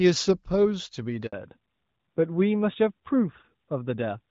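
Speech that begins in wideband quality, with the light coding character of AMR-WB at a rate consistent with 12.65 kbit/s, breaks off in a handover gap from 1.27 to 1.33 s. For 60 ms no speech frames arrive while the call moves between networks, so the sound fades to true silence rather than the smeared, buzzy fill that packet-loss concealment would produce. Its single clean cut, right where the sound changes character, marks it as a network switch rather than scattered jitter losses. From 1.33 s to the end a fallback to narrowband follows. The link has renegotiated down to an older narrowband codec, which fits AMR-NB at 12.2 kbit/s, and nothing above 4 kHz survives. The speech sounds duller and rougher from that point on. Because the change is an abrupt step at the handover and is paired with the narrowband codec's coarser texture, it points to a codec change rather than a gradual low-pass filter or microphone fault.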